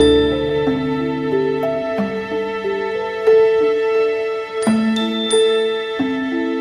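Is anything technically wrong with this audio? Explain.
Yes. Throughout the clip there is clock drift between sender and receiver: the sender's audio clock runs about 1.5 percent slower than the receiver's. The jitter buffer therefore keeps draining, and the receiver has to fill the shortfall with repeated material. The result is small, unevenly spaced timing hiccups across the whole recording.

From 0.53 s to 6.13 s there are repeated timing corrections. The receiver keeps repeating short pieces to stay in step with the slower sender, so the audio plays at about 98 percent speed and gains roughly a tenth of a second overall. This is heard, if at all, as slight hiccups or an unsteady tempo.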